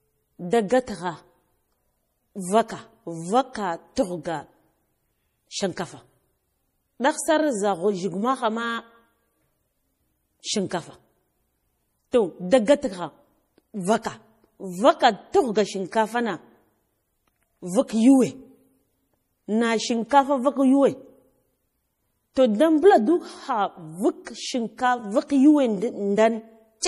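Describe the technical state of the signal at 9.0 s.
Likely MP3 compression throughout the clip starves the encoder of bits, fitting about 40 kbps, so speech at 9.0 s sounds watery and swirly, with nothing above 15.2 kHz.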